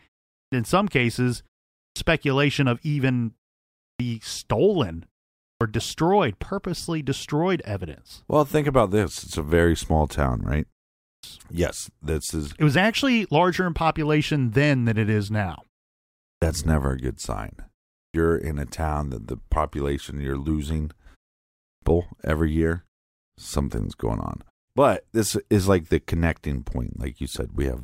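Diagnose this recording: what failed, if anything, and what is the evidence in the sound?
The playback stage shows a clipped start after a pause at 0.33, 1.78, 3.81, 5.41, 11.03, 16.23, 17.96 and 21.65 s. Speech bursts out of silence missing its first 0.17 to 0.20 s while the idle output device wakes. Muted pauses would fade without losing speech.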